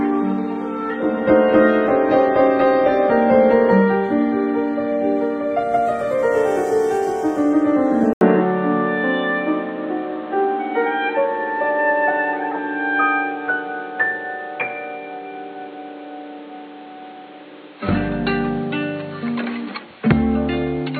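Input switched to a poorer device, from 8.13 s to the end: after an 80 ms silence the sound turns dull and boxy, with nothing above 4.4 kHz and new background noise roughly 30 dB down at unchanged level, likely from a narrower-band microphone taking over.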